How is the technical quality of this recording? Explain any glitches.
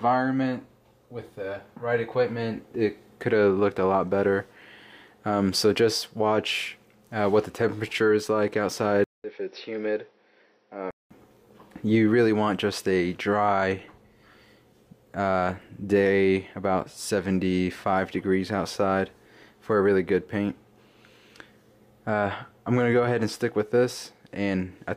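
There's one clear glitch. From 9.04 to 11.11 s, the sound goes dull and boxy, with nothing above 5.8 kHz, a short 200 ms dropout at the changeover, a somewhat lower level, and a faint new background hiss, then it opens back up. That pattern points to an input switched to a poorer device, most likely a different microphone or a headset in call mode. That path has a narrower band, a different tone and its own noise floor.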